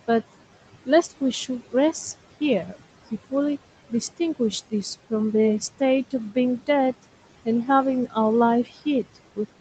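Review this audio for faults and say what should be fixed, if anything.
The main thing to fix is noise suppressor artifacts, and they run the whole way through. The room noise sits only about 16 dB under the speech, and the suppressor is pulling it down by roughly 17 dB, frame by frame. So the background ducks away in the gaps and swells back up under the speech. Easing the suppression depth or cutting the room noise at the source would prevent it.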